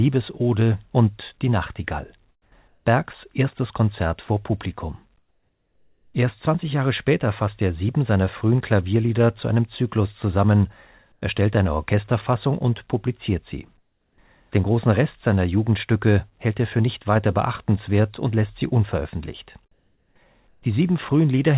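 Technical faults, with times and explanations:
2.3–2.52 s, 2.68–2.86 s, 5.18–6.14 s, 11.12–11.22 s, 13.78–14.18 s (after "und publiziert sie"), 19.72–20.16 s (after "und lässt sie unveröffentlicht") and 20.49–20.63 s: comfort noise in place of the background. In each pause the room tone flattens into a smooth, featureless hiss about 2 to 7 dB quieter. That's likely discontinuous transmission, with the receiver filling the gaps with synthetic noise over this narrowband call path, which has nothing above 4 kHz.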